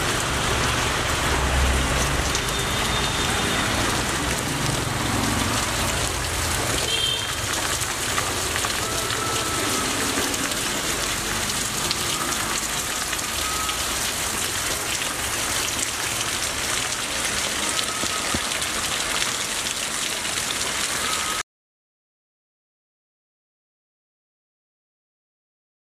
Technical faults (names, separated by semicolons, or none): audio dropout to silence